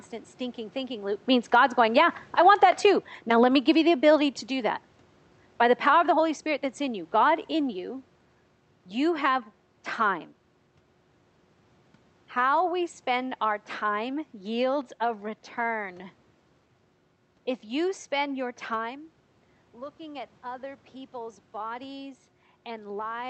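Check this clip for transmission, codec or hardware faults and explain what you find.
One fault stands out: automatic gain falling, from 1.46 s to 7.81 s, starting right after "stinking thinking loop means". The automatic gain control judged the input too loud or its background noise too strong and pulled its gain down step by step, by about 8 dB in total. Speech and room noise sink together, so the loss comes from processing rather than from the talker. On a waveform the envelope tapers steadily across those six seconds. On a spectrogram every band, including the noise floor between phrases, dims evenly.

The level changes near 1.0 s and 18.5 s come from the talker moving relative to the microphone. The call-codec path shows as a spectrum ending near 8 kHz, which fits Opus in wideband mode.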